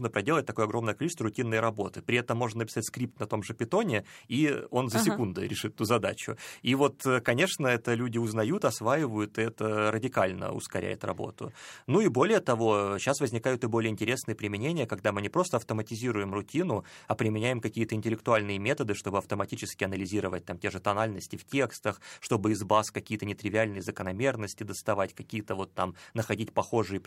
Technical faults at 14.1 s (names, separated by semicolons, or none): none